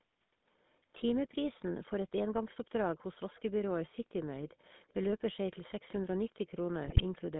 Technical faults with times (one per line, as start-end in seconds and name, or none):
0.00-7.40 GSM full-rate codec
3.35-3.42 echo leak
4.88-4.93 echo leak
5.55-5.62 echo leak
6.84-7.01 GSM bit errors